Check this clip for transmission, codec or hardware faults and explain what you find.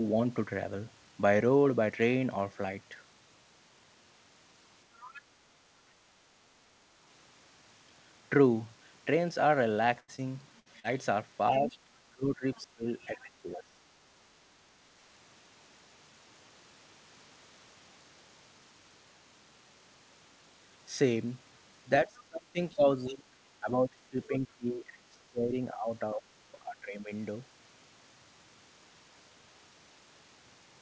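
Four kinds of fault turn up in this speech, all concentrated between 5 and 27 seconds. The audio passes through a call codec, and nothing is heard above 8 kHz, which fits G.722 wideband coding.

Other side's voice leaking through occurs at 5.00 to 5.21 s and again at 12.55 to 12.61 s. A faint second voice sits under the talker, about 20 dB down at first, then only a trace. Loudspeaker sound was likely not fully cancelled at the microphone.

Burst of packet loss hits at 10.00 to 10.10 s and 10.60 to 10.68 s. Roughly 80 ms and 60 ms of audio never arrive. The receiver stretches the last sound and fades it, giving a held buzz or hiss. Then speech jumps ahead.

Short concealed packet loss falls at 10.16 to 10.20 s and 10.80 to 10.86 s. These gaps of about 20 and 40 ms are patched by extending the previous sound, then blending back. Each one is a brief smear or wobble in the speech.

Speech suppressed in double talk dips the talker at 11.52 to 11.77 s, 12.10 to 13.77 s, 22.05 to 26.23 s and 26.63 to 27.11 s. 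Level drops by a few decibels up to about 20 dB, sometimes in broken pieces. The echo canceller, unable to separate both voices, likely turned everything down.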